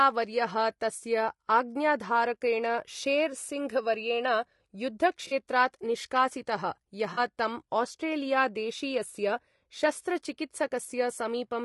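Across the whole speech clip the voice has a rough, grainy texture, with noise filling the gaps between pitch harmonics and a thin, somewhat synthetic top band. This is most likely low-delay AAC compression (AAC-ELD), the codec used in video calls, running at a rate that fits about 32 kbps. Its short frames resolve voice harmonics poorly, so at this bitrate the damage is plainly audible.

At 5.27 to 5.33 s, just before "निष्कासितः यः", there is AAC frame loss with concealment: a brief smeared, noisy patch where the decoder rebuilt missing audio from the last good spectrum. The gap of about 40 ms fits two lost frames. The same thing happens again at 7.13 to 7.19 s, right after "निष्कासितः यः", with the same short, phasey smear.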